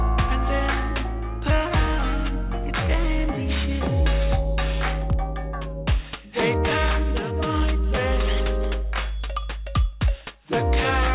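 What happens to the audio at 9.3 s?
At 9.3 s, as throughout the clip, the high end sounds gritty and metallic, with harsh tones that don't belong to the sound. This is aliasing. The sound fits a drop from 48 kHz to 8 kHz with no filtering first, so content above 4 kHz folds back downward, roughly 15 dB below the signal.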